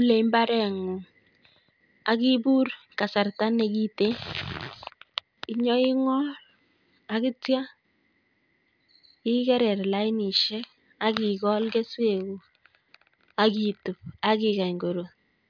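No technical faults are audible anywhere in the speech recording.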